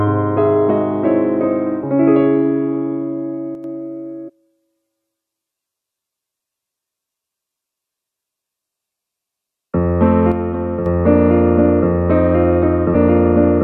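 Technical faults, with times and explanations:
3.55–3.64 s and 10.32–10.86 s, one channel drops out: the sound abruptly falls about 6 dB, most likely because one stereo channel vanished before the mono sum.
4.27–4.30 s and 12.94 s, damaged data in a compressed stream: brief blips as the decoder misreads corrupted frames, loses sync and skips ahead to the next header.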